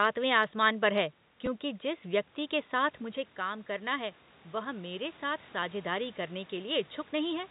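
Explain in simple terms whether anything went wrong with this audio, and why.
One small glitch: at about 1.46 s there's a brief blip from packet loss with the last packet repeated. About 10 ms of speech went missing, and the receiver filled the gap by replaying the previous chunk.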